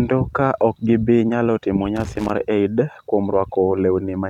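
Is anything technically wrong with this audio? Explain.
Yes. From 1.96 to 2.31 s there is loose connector crackle: a worn or dirty contact in the speech path keeps making and breaking as it shifts, chopping the signal, so an irregular burst of scratchy crackle lasts about a third of a second.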